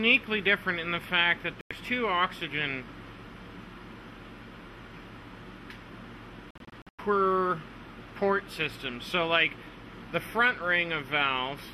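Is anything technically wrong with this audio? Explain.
Yes. At 1.61 s the sound mutes abruptly for about 0.1 s, and from 6.51 s to 6.99 s it breaks into several short holes totalling about 264 ms over roughly half a second, none longer than about 96 ms. This is a digital broadcast dropout: the receiver stopped getting valid frames and muted until clean ones arrived. The hole lengths fit whole lost frames of about 24 ms each, and the missing programme is gone.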